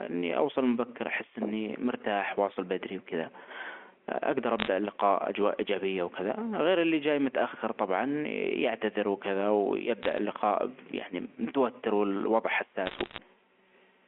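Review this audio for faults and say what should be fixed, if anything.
Bit errors on a digital phone line produce bursts of sharp ticks and crackle at 4.59–4.68 s (before "اللقاء أجواء إيجابية"), 10.03–10.18 s (before "اللقاء يعني") and 12.86–13.18 s (after "متوتر والوضع"). Flipped bits in the A-law bytes corrupt single samples, and the underlying speech is unchanged. Fix the line or add error protection on the digital link.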